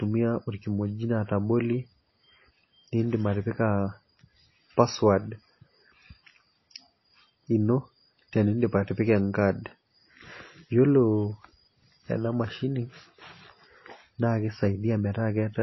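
Throughout the speech, nothing is heard above about 5.8 kHz, with smeared, watery MP3 artefacts: low-bitrate audio saved at a high bitrate, likely a 24 kbit/s encode re-saved at 256 kbit/s.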